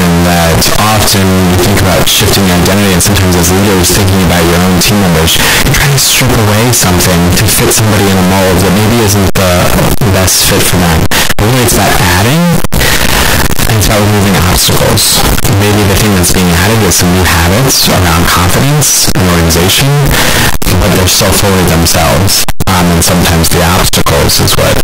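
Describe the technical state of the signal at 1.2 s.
At 1.2 s, as everywhere in this speech clip, you're hearing float read as integer. It's likely 32-bit float samples being read as 32-bit integers, so sign and exponent bits drive the level. That gives a near-square, very loud, harsh sound, with background noise as loud as the talking, though pitch still comes through.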